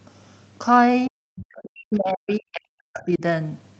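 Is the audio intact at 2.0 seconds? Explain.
No. At 2.0 s the speech is inside a stretch of speech suppressed in double talk, running from 1.37 to 3.22 s. The level sinks, at its deepest by roughly 40 dB, for about a second and a half in total, so the voice dips. The likely cause is that both ends were talking at once and the echo canceller, unable to tell the near talker from loudspeaker echo, attenuated everything.

Just before that moment, from 1.93 to 1.98 s, there is a brief scrap of the other side's voice leaking through, around 30 dB below the speech. It is short, a residue of far-end audio played from the loudspeaker and picked up by the microphone. The likely cause is the echo canceller failing to subtract all of it during the same double-talk period.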